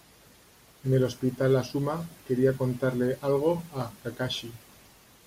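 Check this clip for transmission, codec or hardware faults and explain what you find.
One hardware-related fault is present. Clock drift buffer slips run from 1.17 to 5.13 s, with a short click recurring every 1.32 s during the speech, about four in all. The likely cause is two devices on separate clocks differing by a few hundred parts per million. The buffer between them drifts until a small block of about 15 samples is dropped or repeated, producing each click.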